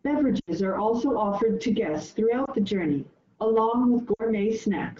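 Lost AMR speech frames occur three times: speech frames failed their checksum, so the AMR decoder patched each gap by reusing the last good pitch and vocal tract settings at falling gain. At 0.39 to 0.51 s, about 80 ms is concealed before "are also offered to"; at 2.45 s a single 20 ms frame drops between "also offered to guests" and "the journey along"; at 4.13 to 4.23 s about 60 ms goes after "the journey along". The wideband coding around them sounds clean, consistent with 12.65 kbit/s.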